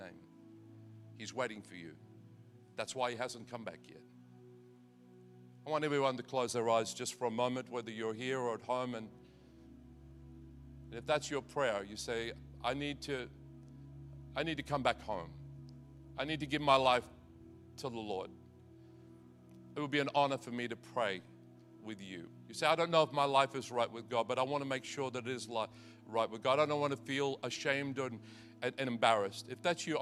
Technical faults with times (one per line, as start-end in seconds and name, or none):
none